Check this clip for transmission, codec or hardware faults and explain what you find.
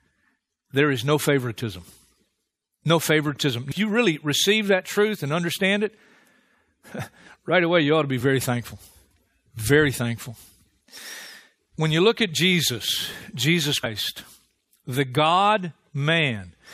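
There are two dropouts of compressed frames skipped in this speech. At 3.70 s, just before "you really receive that", and at 13.83 s, roughly seven 23.2 ms frames go missing, about a fifth of a second. The speech jumps forward at each join.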